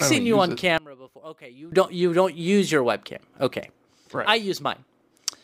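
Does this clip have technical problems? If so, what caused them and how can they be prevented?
Yes. From 0.78 to 1.72 s, between "seen you on it" and "don't you don't use", the speech drops by about 20 dB to a faint copy, likely from one channel inverted, cancelling centred content in mono. A plain dropout would go silent instead. Check polarity on both channels before summing to mono.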